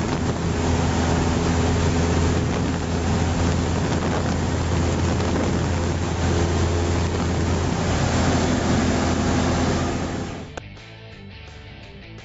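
No technical faults can be heard anywhere in the audio, and the signal holds steady throughout.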